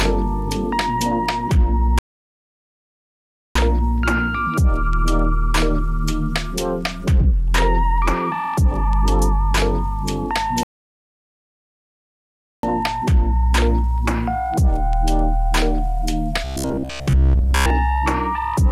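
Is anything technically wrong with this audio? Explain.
Yes, there are two kinds of problem. The first is a playback stall, which happens twice: the audio drops to silence from 1.99 to 3.55 s (about 1.57 s) and again from 10.63 to 12.63 s (2.0 s). Each time the sound cuts off mid-flow and then carries on, most likely because the player ran out of buffered data or its thread got blocked.

The second is a robotic sound from repeated short buffers, between 16.44 and 17.70 s. The sound turns into a stiff, metallic buzz locked at 66.8 Hz. That fits the software likely looping a roughly 15 ms chunk while fresh audio arrived too slowly, so most of that stretch is repeats rather than real audio.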